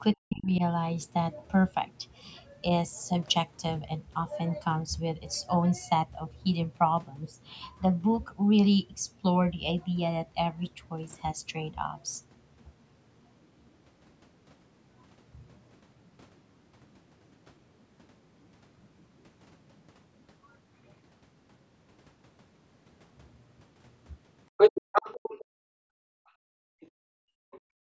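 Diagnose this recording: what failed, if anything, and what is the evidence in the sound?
Speech suppressed in double talk, at the call-processing stage. From 0.15 to 0.62 s the speech dips sharply, by roughly 25 dB at its deepest, for about a third of a second in total. This likely came from the echo canceller turning the mic down while both ends spoke.

The other side's voice leaking through, also at the call-processing stage. From 24.57 to 25.45 s a second voice sits at roughly the same level as the speech. Much fainter scraps follow at 26.81 to 26.87 s and 27.51 to 27.6 s. Likely cause: incomplete cancellation of loudspeaker echo.

Background gated by the echo canceller, at the call-processing stage. From 25.45 s to the end, the room sound drops by about 40 dB at its deepest, for around 2 s in total. The canceller clamped the microphone hard while the loudspeaker played, and the band-limiting to 8 kHz is normal call processing.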